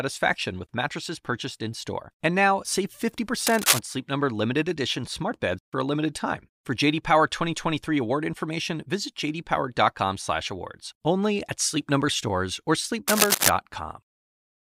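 Scratchy rustling slightly louder than the speech follows "now save" (3.47–3.79 s) and "stores or" (13.08–13.49 s). This is cable scratch noise, likely from a worn connector being moved.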